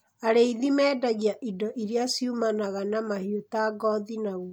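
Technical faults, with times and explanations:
No technical faults can be heard in this speech clip.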